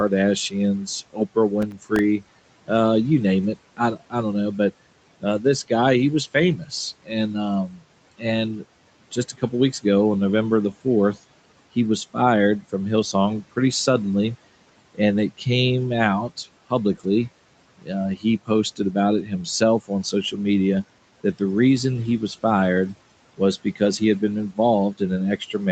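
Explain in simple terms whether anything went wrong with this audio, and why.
Speech cut by the noise suppressor happens at 0.1–2.7 s (before "you name it"), 3.77–9.84 s (ending before "ago on"), 12.14–13.57 s (after "the fourth he was"), 14.95–21.41 s and 23.37–25.71 s. The suppressor mistook bits of speech for background noise and turned them down, so some sounds come out swallowed or faint.

Processor overload crackle runs from 1.62 to 1.99 s. The computer fell behind on tiny chunks of audio, about ten of them over that stretch. Each late chunk left a brief silent gap, and together they make a gritty crackle.

A lost packet rebuilt from error correction sits at 16.95–17.05 s. Audio was lost in transit and filled in from a rougher backup copy, so about 60 ms sound rougher and noisier rather than dropping out.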